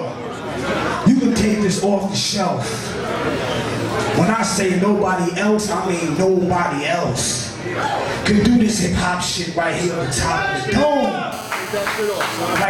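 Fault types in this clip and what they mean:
GSM phone buzz: a nearby handset's 217 Hz transmit bursts rectified into the audio path, heard as a steady raspy buzz rich in harmonics, about 14 dB below the signal, unlike smooth mains hum.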